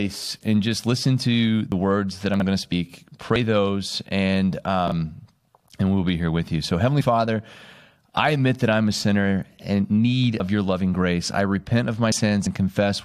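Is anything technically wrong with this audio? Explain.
Yes, the clip has three kinds of fault, all heard as brief disturbances in the speech.

At 1.72 s, between "and just listen to" and "words that", and again at 3.36, 10.4 and 12.12 s, there is a sudden jump forward in the sound. About 40 ms is missing each time, closer to a tenth of a second at 10.4 s. This is likely a dropped buffer (overrun): the hardware overwrote samples before the program collected them, so the two sides butt together with no gap.

Right after "words that", from 2.34 to 2.42 s, and again from 4.88 to 4.92 s, there is a jumbled moment. These are chunks out of order. The audio moves in 20 ms chunks, and one chunk played three chunks late in the first case and one chunk late in the second, leaving hard joins where the sequence breaks.

Just after "going to" at 2.71 s, and again at 7.00–7.02 s and at 12.45 s, there is a short jump ahead in the sound. 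These are compressed frames skipped. About two 21.3 ms frames, roughly 40 ms of audio, never decode.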